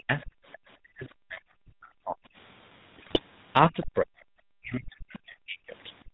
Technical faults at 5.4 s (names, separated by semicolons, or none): GSM full-rate codec; speech suppressed in double talk